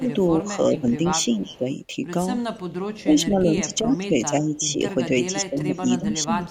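From 0.0 to 1.66 s the speech is suppressed in double talk. The level dips by roughly 10 dB in places, about half a second in all. The likely cause is an echo canceller that could not tell this talker from loudspeaker echo while both sides spoke, so it turned everything down.

From 0.78 to 1.57 s an echo leak overlaps it. A faint copy of the voice trails 375 ms behind, around 20 dB below the speech. The far end's canceller likely failed to remove what its microphone caught from its loudspeaker.

A brief scrap of the same echo returns at 2.96 to 3.03 s, weaker, around 30 dB down.

From 3.03 to 6.5 s the double-talk suppression resumes. The voice sinks by up to roughly 10 dB across about two seconds of this stretch.

Inside it, from 3.75 to 3.99 s, the 375 ms echo leaks through again, around 30 dB down.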